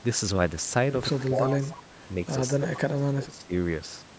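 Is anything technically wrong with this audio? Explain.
Yes. Three problems can be heard in this speech clip.

Clock drift buffer slips run from 0.68 s to 3.81 s. A click recurs every 1.05 s, about four times. The likely cause is two devices whose clocks disagree by roughly a thousand parts per million. A buffer drifts until about fifty samples are dropped or repeated.

Speech suppressed in double talk occurs from 1.29 s to 1.73 s and again from 2.55 s to 3.53 s. The voice dips by about 15 dB, then by about 20 dB. It likely comes from an echo canceller that turned down its own talker along with the loudspeaker echo while they overlapped.

Echo leak appears from 1.50 s to 1.77 s. A copy of the voice returns 215 ms late, about 10 dB below the speech. The likely cause is a loudspeaker on one side whose echo was not fully cancelled, so part of it was sent back.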